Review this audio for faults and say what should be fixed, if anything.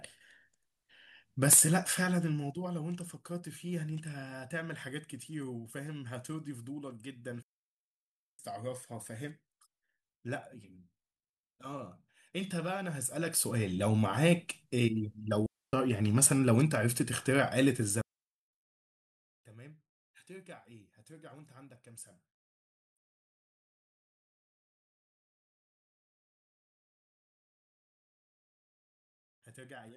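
Digital wireless dropouts at 7.43–8.39 s, 15.46–15.73 s and 18.01–18.53 s: the receiver mutes on lost data, leaving clean near-silent gaps (flat waveform, blank spectrogram columns) with no noise bursts. Prevent them by keeping line of sight, shortening transmitter distance and clearing crowded frequencies.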